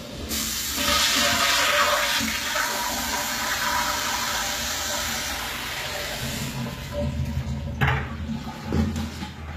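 From start to finish the top end has that bright-but-synthetic character of HE-AAC compression, likely at a very low bitrate, something in the region of 20 kbps. The codec keeps only the lower spectrum and fakes the treble by copying those bands upward under a rough envelope, so the highs don't quite match what's below them. The result is grainy, metallic sizzle on anything sharp, and nothing at all above about 14.9 kHz.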